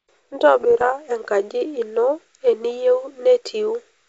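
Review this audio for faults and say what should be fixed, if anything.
Bit errors on the ADPCM link hit the speech from 0.61 to 0.85 s as pops and rough bursts with brief level jumps. Each flipped bit upsets the decoder's step size and predictor, so every error rings on for several milliseconds. The error rate is low, around 0.15 percent. A waveform shows spiky, uneven envelope bumps, and a spectrogram shows short broadband vertical smears. The G.722 wideband coding itself sounds clean. Fix it with error detection and concealment on the link, or with a cleaner radio channel.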